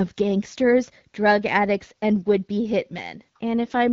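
No technical faults are audible in this speech, which comes through an AMR wideband (HD Voice) codec at 12.65 kbit/s with only the light coding damage expected at that rate.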